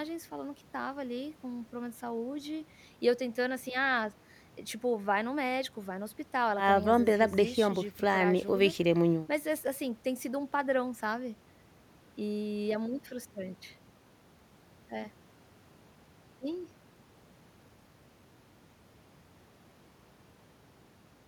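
A speech recording with nothing technically wrong with it at any point.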